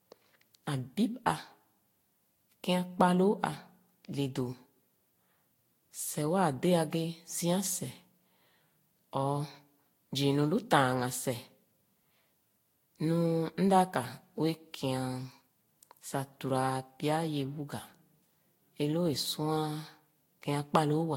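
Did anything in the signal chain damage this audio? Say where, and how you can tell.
Yes, at the codec stage: throughout the speech there is swirly, smeared, hollow coloration, blurred attacks and nothing above 16.6 kHz, likely generation loss from around five lossy passes at about 64 kbit/s, consistent with Vorbis. Each re-encode quantised afresh on a shifted frame grid, compounding noise and spectral holes.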